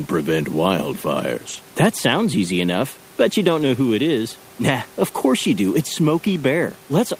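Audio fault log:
1.49–1.59 s, 3.57–3.63 s and 6.27–6.45 s: lost packets rebuilt from error correction. Each stretch plays continuously but sounds rougher and grainier. The lost audio was restored from a lower-bitrate copy carried in the following packet, so only detail is lost. The durations are 60, 40 and 100 ms, consistent with runs of 20 ms packets. The second falls between "easy enough but you" and "know who it is". All three sit above room noise roughly 28 dB down.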